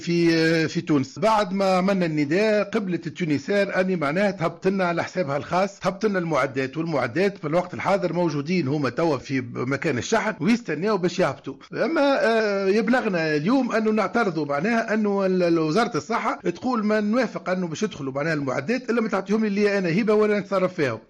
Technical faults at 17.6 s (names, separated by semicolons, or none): MP2 compression